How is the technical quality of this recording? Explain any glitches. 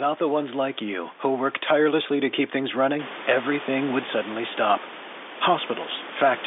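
The recording has two short glitches, both bit errors on a digital phone line. From 1.53 to 1.63 s, after "ones like you who", and again at 4.70 s, after "running everything would suddenly", flipped bits corrupt individual samples. Where a high bit or the sign of a loud sample is hit, this makes a sharp tick, and many such errors together sound like crackle over the speech.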